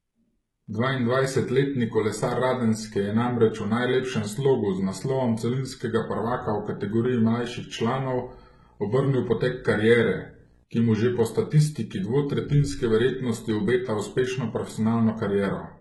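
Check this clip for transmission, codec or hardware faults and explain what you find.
Two faults are present: heavy codec damage across the whole speech clip, and a video or display buzz in the middle.

Throughout, the treble sounds rebuilt rather than recorded: sibilants turn gritty and metallic and harmonics fail to line up above the crossover. This is likely HE-AAC compression, whose spectral band replication copies lower bands upward under a coarse envelope, and the damage fits a very low bitrate around 16 kbps. Plain band-limiting would simply dull the top, not synthesise it.

From 6.83 to 10.64 s, between "naslovom celinskega prvaka v" and "ki mu že po", a video or display buzz appears: a 60 Hz field-rate buzz with hash above it, around 35 dB below the speech, from a screen or video cable coupling into the audio. Mains hum would be a smoother tone without that hash.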